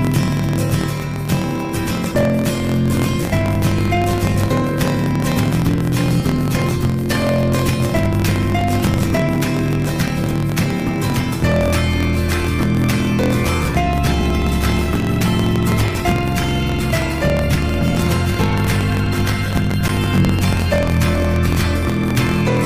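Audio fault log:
Throughout: block size mismatch (truncated). Each block's tail gets dropped, so there's a steady 43.1 Hz buzz, consistent with a 1024-sample read, and everything runs 1.12 times fast at near-normal pitch.
7.86 to 9.72 s: CD scratch ticks. There are 11 ticks at roughly one per disc turn where unrecoverable data got patched over, each only a few milliseconds.
19.14 to 20.26 s: CD scratch ticks. Seven more land at the same once-per-revolution pace, each a tick or dropout of a few milliseconds.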